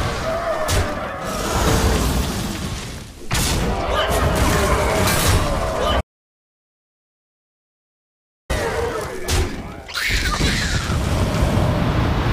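There's an audio dropout to silence from 6.01 s to 8.50 s: the sound cuts off mid-flow and leaves about 2.5 s of dead silence with no room tone at all. That's most likely the input dropping out while the recorder kept writing silence.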